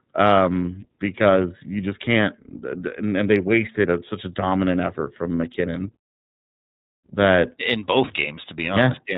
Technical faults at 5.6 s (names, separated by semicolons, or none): iLBC codec